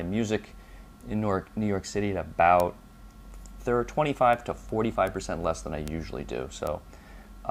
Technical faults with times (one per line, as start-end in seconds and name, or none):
2.60 bit error spike
4.33 bit error spike
5.07 bit error spike
5.88 bit error spike
6.67 bit error spike